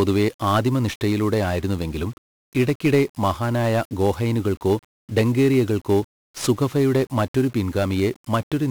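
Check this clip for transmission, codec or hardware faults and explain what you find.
The clip carries a heavy codec fault across its full length. 1-bit DFPWM compression, throughout: each sample is reduced to a single bit that nudges an adaptive level up or down. The speech comes out fuzzy and crackly, with treble swamped by broadband hiss, which fits a stream of around 48 kbps.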